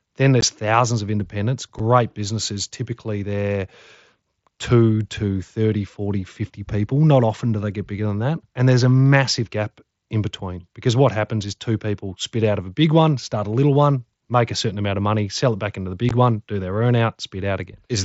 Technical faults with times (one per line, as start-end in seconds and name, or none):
0.41 unconcealed Bluetooth headset packet loss
1.79 unconcealed Bluetooth headset packet loss
16.09 unconcealed Bluetooth headset packet loss